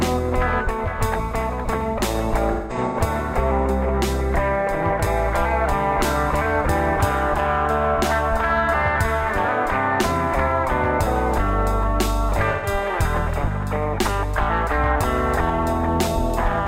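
AAC frame loss with concealment shows up at 2.52 to 2.97 s as scattered dropouts, the longest around 150 ms, and again at 12.51 to 12.67 s. The decoder rebuilds the gaps from the last good spectrum, so they come out as smeared, phasey blurs.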